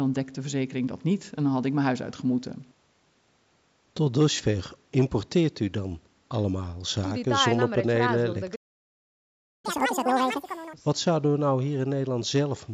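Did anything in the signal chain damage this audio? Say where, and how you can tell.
Yes. A playback stall at 8.55 s cuts the speech to silence for about 1.08 s, until 9.65 s. The player likely ran dry or blocked.

From 9.65 to 10.73 s, playback catches up at higher speed. It runs at double speed and the pitch rises nearly an octave as the backlog is resampled.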